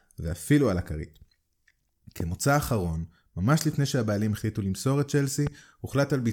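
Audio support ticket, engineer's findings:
Loud pop, twice: 2.20–2.23 s and 5.47–5.49 s. Single sharp click each, peaking roughly 10 dB above the speech, which continues underneath. Likely cause: a voltage pulse from a connector, switch or static discharge, shaped by downstream circuitry into a brief pop.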